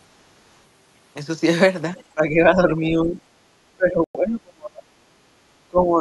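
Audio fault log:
1.97–2.04 s, other side's voice leaking through: the echo canceller likely left a scrap of the far-end loudspeaker signal in the microphone path, so a brief, faint second voice, about 30 dB below the talker, slips through for some 70 ms.
2.14–3.19 s, 3.75–4.88 s and 5.68–6.00 s, speech suppressed in double talk: with both sides talking, the canceller likely couldn't separate the talker from the echo and ducked everything. The voice sinks by about 10 dB, then 30 dB, then 25 dB.
4.04–4.17 s, Bluetooth stall: interference likely delayed packets until the headphone buffer emptied, so playback halts into 104 ms of silence before the sound resumes. This falls inside the second suppressed stretch.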